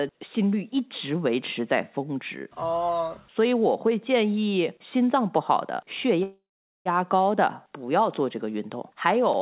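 At 6.23 s there's a call audio freeze lasting until 6.88 s: the last sound smears into a fading buzz, then about 0.44 s of silence, and the speech resumes with nothing lost, just shifted later. Likely a jitter buffer starved by delayed packets, heard through narrowband audio topping out at 4 kHz.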